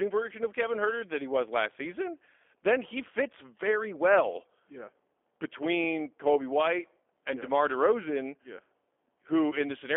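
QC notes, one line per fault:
throughout G.729 codec: a low-rate coder rebuilds each 10 ms frame from a vocal tract filter, a pitch predictor and a few pulses, consistent with 8 kbit/s G.729A. Only 300 Hz to 3.4 kHz survives, so the speech sounds plainly rough, synthetic and band-limited.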